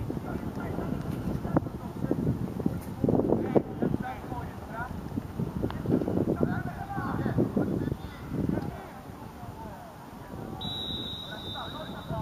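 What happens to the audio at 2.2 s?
Nothing goes wrong at 2.2 s; the audio plays through that moment intact, with no dropout, click or other fault.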